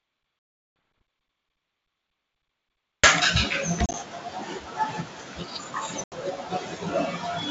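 Packet loss on an ADPCM call cuts hard-edged silent gaps at 0.39–0.76 s (370 ms), 3.86–3.95 s (50 ms in short bursts) and 6.04–6.13 s (80 ms). The decoder's predictor and step size drift from the sender's, so the speech returns briefly slightly distorted before settling.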